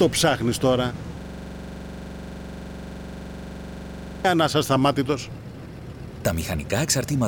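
A system hang loop runs from 1.21 to 4.25 s: a 42.67 ms fragment, consistent with a 2048-sample ring buffer, repeats exactly at 23.4 Hz, producing a rapid mechanical stutter.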